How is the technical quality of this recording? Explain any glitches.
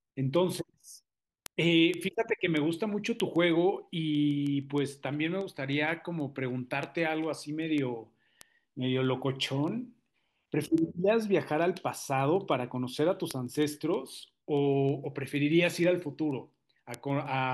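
There's a real problem here: word clock ticks run through the speech from 0.20 to 17.42 s. They come as steady sharp ticks roughly every 0.15 s, about a hundred in all. An unlocked digital receiver drifts around 150 ppm off, dropping or repeating a sample each slip.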